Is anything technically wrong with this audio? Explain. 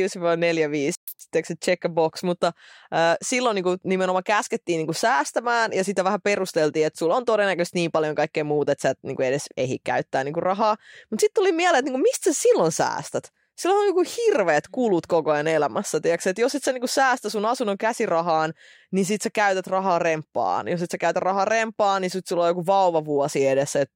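Yes. There are two linked faults near the start of this speech clip.

From 0.95 to 1.08 s there is a playback stall. The speech cuts out mid-flow for about 124 ms. The player likely ran short of data or its thread was blocked. Silence fills the gap until output resumes.

From 1.08 to 1.2 s comes catch-up at higher speed. The player resamples its backlog to recover lost time. Playback runs at 2.0 times normal speed. Pitch jumps roughly ten semitones higher, giving a brief chipmunk-like burst before normal speed returns.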